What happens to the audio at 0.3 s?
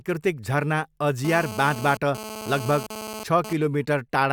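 Nothing goes wrong at 0.3 s; the speech plays through that moment intact, with no dropout, click or distortion.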